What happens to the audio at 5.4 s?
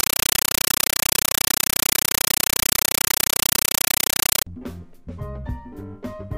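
Nothing goes wrong at 5.4 s; the audio carries on intact through that moment with no dropout, click, glitch or distortion.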